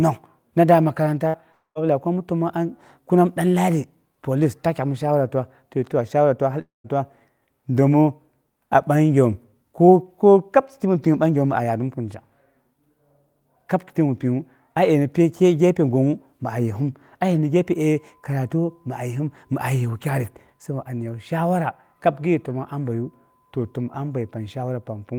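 At 1.27 s a burst of packet loss cuts into the speech for about 0.09 s. Roughly 60 ms of speech never arrives, and the receiver fills the hole by stretching the last sound into a brief fade before the talk resumes a little further on. What marks it as a short burst is that the filler never dies away to silence. The concealment covers the whole gap.

From 1.52 to 1.78 s the sound holds and fades in the same way, but this time the fill gives out. After the fade there is about 110 ms of silence, and then speech returns at "lagai ko amna təmongnga" with roughly 240 ms lost. The same thing happens from 6.61 to 6.87 s, where the fade runs into about 150 ms of silence. In both places the concealment runs out and leaves dead air, which points to a likely long network dropout rather than a short packet burst.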